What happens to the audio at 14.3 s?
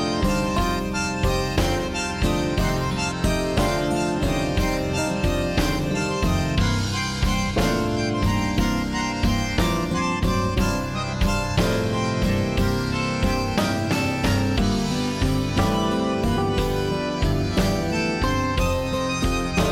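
Nothing goes wrong at 14.3 s; the audio carries on intact through that moment with no dropout, click, distortion or other fault.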